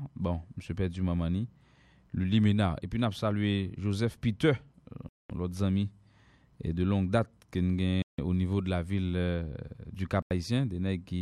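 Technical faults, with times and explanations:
5.09–5.30 s, 8.02–8.19 s and 10.22–10.31 s, Bluetooth stall: the speech drops to dead silence for 210, 160 and 84 ms, then carries on, with the first two gaps just before "l'autre ami" and "niveau de la ville". Likely interference delayed packets until the headphones' buffer ran dry.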